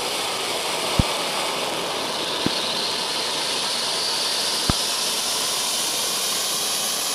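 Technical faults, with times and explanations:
0.99–1.02 s, 2.46–2.49 s, 4.70–4.72 s, loud pop: three single pops, each peaking roughly 20 dB above the sound and lasting about 23 ms, likely from a voltage pulse such as static or a switch. Unlike a dropout, the sound continues beneath each thump.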